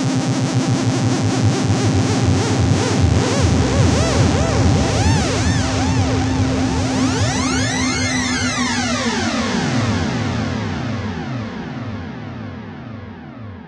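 No technical fault can be heard anywhere in this recording of sounds.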